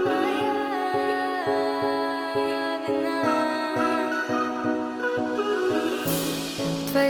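At 4.19 s the adaptive stream switches to a lower bitrate and holds it to the end. Codec artefacts abruptly rise, with no gap, which fits a drop from roughly 64 to 24 kbit/s Opus.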